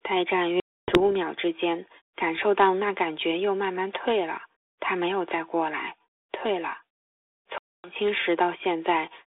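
At 0.6 s and again at 7.58 s the speech drops into hard-edged silence, gaps of about 280 ms and 260 ms that each point to around fifteen lost packets. Recovery runs to 1.01 s and 7.91 s. This is packet loss on an ADPCM call. Silence replaced the missing packets, and the G.726 decoder (32 kbit/s, band 300 Hz to 3.6 kHz) lost track of the sender's predictor and step size. Speech returns distorted until the two realign.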